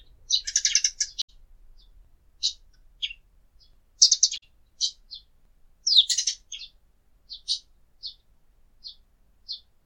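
Two short glitches from damaged data in the compressed stream, at 1.19 to 1.30 s and 4.36 to 4.43 s, each a brief blip. Corrupted bytes made the decoder misread those frames and lose sync until it found the next good frame header.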